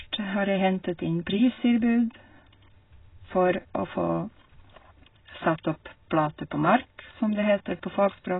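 From start to finish the speech sounds dull and smeared, with nothing above about 3.8 kHz and heavy coding damage. That's likely AAC compression, AAC-LC squeezed hard enough to fit a bitrate around 16 kbps, so the encoder pulled its cut-off right down.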